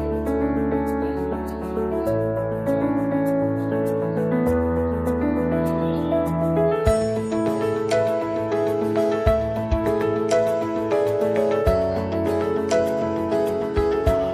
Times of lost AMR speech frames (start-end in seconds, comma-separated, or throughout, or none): none